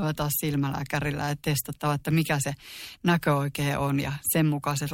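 No technical faults can be heard in this speech recording. The audio holds steady throughout, with no moment that stands out as a problem.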